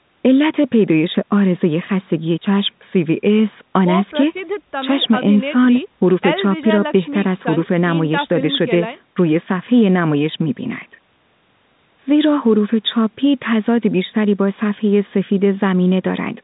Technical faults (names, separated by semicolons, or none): none